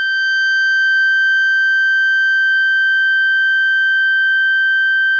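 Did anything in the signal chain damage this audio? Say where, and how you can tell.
No, no damage is audible.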